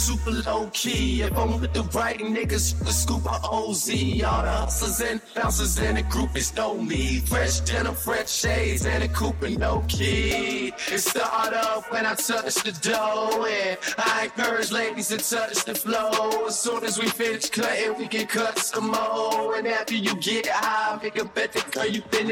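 From 16.54 to 17.37 s, a block size mismatch (padded) chops the sound with regular zero gaps, giving a 43.1 Hz buzz, which fits a 1024-sample read block, with only a 0.999 slowdown. The waveform shows periodic flat dropouts, and the spectrogram shows evenly spaced vertical stripes.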